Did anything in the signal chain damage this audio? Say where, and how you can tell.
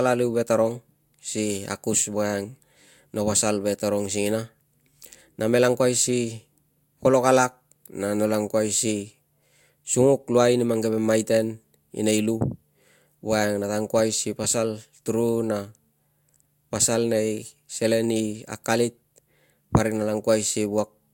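No, nothing in the chain audibly damaged this speech recording at any stage.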